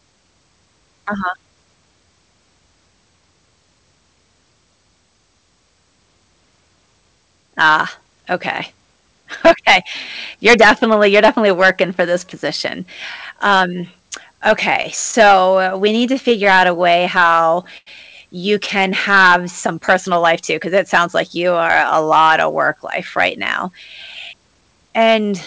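From 14.82 to 17.88 s, just before "you can", scattered short gaps appear. About fifteen lost packets were patched by extending the last sound, giving brief ticks and smears.

From 19.11 to 19.77 s, between "you can" and "personal life too 'cause", a jitter buffer slow-down repeats pitch periods. Speech drags to 92% speed, stretched by 56 ms.

From 21.86 to 24.91 s, after "sounds like you are", a jitter buffer speed-up trims pitch periods. Roughly 200 ms goes, so speech hurries at 106% speed.

Throughout, the G.722 call path leaves nothing above 8 kHz.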